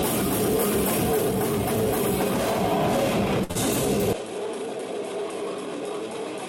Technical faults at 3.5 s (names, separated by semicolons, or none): short stall from a late packet; short concealed packet loss